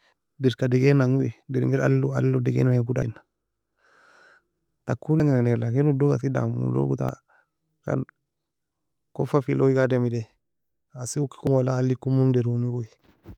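At 3.02, 5.20, 7.09 and 11.47 s the speech is broken by a brief blip, each about 4 ms long, from damaged data in a compressed stream. The decoder misreads corrupted frames and has to resync.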